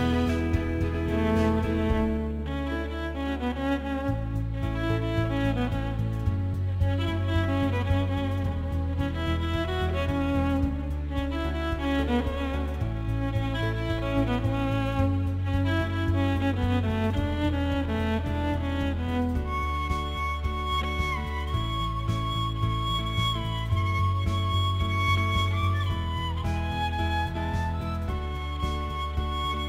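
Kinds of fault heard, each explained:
Crude rate conversion: The sample rate was changed by a small ratio, about 1.09, which fits a 44.1 kHz to 48 kHz step done by repeating the nearest sample rather than filtering. The uneven repeats create a periodic timing error that produces shifted, inharmonic copies of the source, sitting around 30 dB below the signal across the whole clip. It sounds like a gritty, inharmonic fizz that rises and falls with the louder, brighter parts of the sound.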